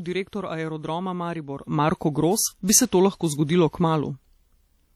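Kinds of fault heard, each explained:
WMA compression: The sound carries a washy, ringing quality with hiss that rises and falls with the signal. This is likely the work of a Windows Media Audio transform encoder, which quantises long blocks of audio so the noise spreads over tens of milliseconds and weak spectral detail drops out. The damage is plainly audible throughout the clip, and its character fits a low bitrate of around 48 kbps.
pre-echo: The transform codec spreads its quantisation noise evenly across each block. Here an attack sits late in a block, so noise sized for the loud onset also fills the quiet stretch before it. Just before the attack near 0.30 s, a short burst of hiss runs for about 33 ms, up to about 0.33 s, and the onset itself sounds smeared.
sudden gain jump: At 1.63 s the level steps up by about 10 dB from one sample to the next and stays there to the end. The likely cause is a digital gain change applied without any ramp, such as a setting change or bit shift. 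Because the change acts on the whole signal, the speech and the background noise both jump together.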